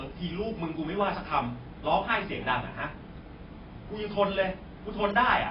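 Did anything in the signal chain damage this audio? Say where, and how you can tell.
Yes, at the codec stage, throughout the speech. Nothing survives above 5.2 kHz, and the sibilants turn fizzy and warbling rather than simply muffled. This is heavy AAC compression, likely AAC-LC at a starved bitrate near 16 kbps. The encoder drops the cut-off and quantises the remaining bands coarsely, leaving spectral holes and swirling texture. A plain low-pass filter or narrowband channel would dull the sound just as much but leave what remains clean and steady.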